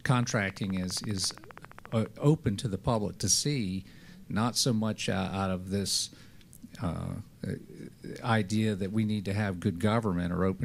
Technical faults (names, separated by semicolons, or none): train of clicks